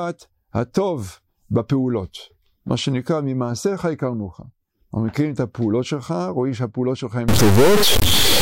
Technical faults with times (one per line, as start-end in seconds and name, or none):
7.28-8.41 stuck bit